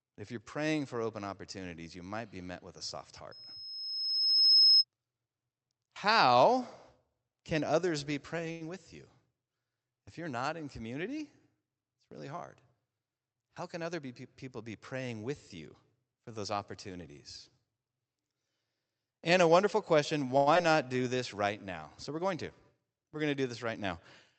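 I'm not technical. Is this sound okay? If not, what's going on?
No. At 3.31 to 4.85 s there is loudspeaker feedback squeal. A microphone picked up the loudspeaker it was feeding, and one pitch, about 5.2 kHz, fed on itself and swelled over roughly a second and a half into a piercing whistle well above the speech.

At 8.51 to 8.62 s and again at 20.37 to 20.48 s there is a short stall from a late packet. A piece of the call arrived late, so the receiver held the last sound for about 91 and 93 ms while waiting. Nothing is lost, but a sound drags on unnaturally.

From 12.86 to 14.01 s there is a jitter buffer speed-up. The receiver had built up extra backlog and trimmed tiny slices, around a tenth of a second in total, to catch up. The speech runs about 9% faster without changing pitch, so it sounds slightly rushed.

At 20.54 to 20.57 s, just after the second stall, there is a short concealed packet loss. 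About 20 ms of audio never arrived, and the receiver patched the gap by extending the sound around it. This leaves a brief smear or wobble where a small piece of speech may drop out.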